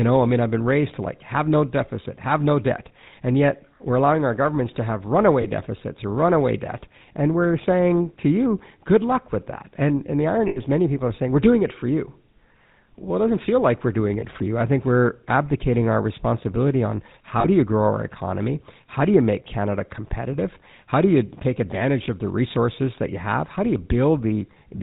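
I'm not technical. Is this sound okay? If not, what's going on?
No. The speech went through the GSM full-rate codec, an old mobile-phone system that rebuilds the voice from a rough model and drops everything above 4 kHz. Throughout, this leaves the voice plainly buzzy and gravelly, and dull at the top.

There are also lost GSM frames, where pieces of the signal never arrived and the phone repeated the last good piece. Each gap is heard as a rough, metallic ring: at 5.42 s after "our governments to have", at 10.48 to 10.59 s after "and the", at 14.2 s, and at 17.4 s after "abdicating our responsibility on".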